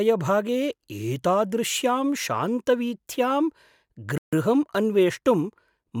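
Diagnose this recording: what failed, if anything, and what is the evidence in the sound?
A playback stall from 4.18 to 4.33 s cuts the speech off mid-flow with about 150 ms of silence before it carries on. The stage is playback: the player likely ran out of buffered data or had its thread blocked, so output went silent until it recovered.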